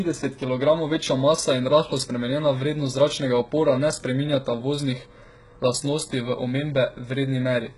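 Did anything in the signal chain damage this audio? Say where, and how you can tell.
Yes, at the codec stage. Throughout, the speech has gritty, lispy sibilants and nothing above 11.1 kHz, likely HE-AAC compression rebuilding the treble by copying lower bands upward, consistent with a bitrate around 12 kbps. A spectrogram shows a hard ceiling and blocky, repeated high-band texture.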